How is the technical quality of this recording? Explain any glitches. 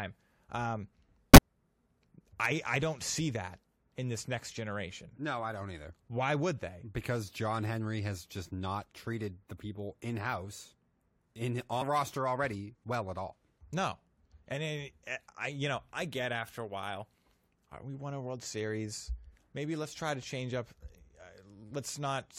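The speech has two brief dropouts from compressed frames skipped. At 1.34–1.38 s roughly 20 ms of audio is lost, and at 11.81–11.83 s about a tenth of a second. Missing or rejected frames make the decoder jump ahead. Each join is a brief skip in the speech, which shows as a small discontinuity in the waveform and a narrow vertical smudge on a spectrogram.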